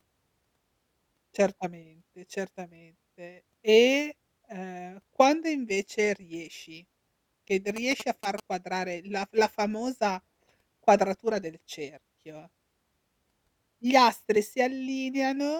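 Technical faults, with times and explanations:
7.76 to 8.40 s, GSM signalling bursts: a nearby 2G phone is exchanging short groups of radio bursts with its network, and the audio circuitry rectifies that RF into the signal path. Right after "quando invece riesci che", the speech is overlaid by a galloping dit-dit-dit of brief buzzes pulsing at about 217 Hz, roughly 10 dB below the speech, ending before "quadrare la f".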